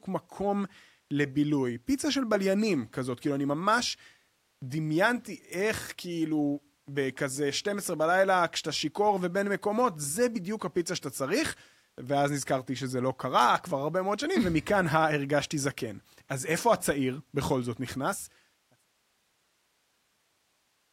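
No technical faults are audible.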